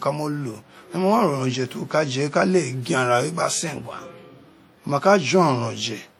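From start to finish the speech carries plainly audible transform-codec damage, most likely from WMA compression. Quantisation noise is smeared across long blocks, so consonant onsets ring and vowels sit in a washy haze, with a hiss that swells and fades as the signal level moves. Some weaker spectral detail drops out entirely. The degree of damage points to a low bitrate, roughly 48 kbps, even though the bandwidth still extends to about 20 kHz.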